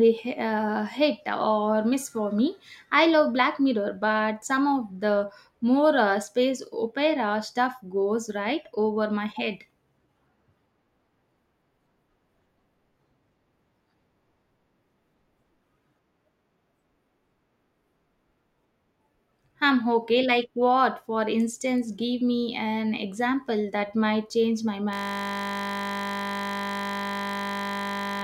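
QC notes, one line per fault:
24.93–28.24 s, system hang loop: a 20 ms fragment repeats exactly to the end, producing a steady 50 Hz buzz as the frozen system leaves the hardware cycling one buffer. Waveform shows identical repeating cycles; spectrogram shows harmonic lines spaced 50 Hz apart.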